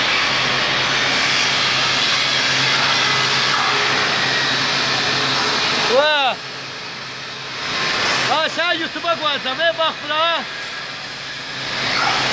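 No technical faults can be heard anywhere in the recording, and the signal holds steady throughout.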